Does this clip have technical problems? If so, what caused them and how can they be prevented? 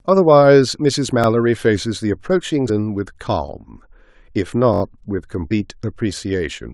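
Yes. Audio data three times failed to reach the output device in time, so the device replayed its last buffer instead of going silent. This is a repeated buffer fault. The stretches last about 21 ms, which fits a 1024-sample buffer. Each one plays once more at 1.24–1.26 s and 2.48–2.50 s, heard as a brief stutter with a hard join. At 4.74–4.82 s the same buffer plays four extra times, producing a longer stutter. No audio is skipped. Using a larger buffer, or giving the audio thread higher scheduling priority, prevents this.

Separately, parts of the compressed stream arrived corrupted. This is damaged data in a compressed stream. Bytes there were lost, zeroed, overwritten or mixed with other data, so the decoder misread those frames and lost sync until it found the next valid frame header. The result is a short chirp or blip at 2.68 s and again at 5.50 s. Error-checked transport, or verifying file integrity with checksums before decoding, prevents this.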